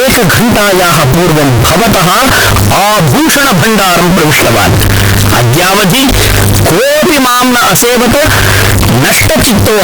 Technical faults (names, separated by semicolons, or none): signed and unsigned mixed up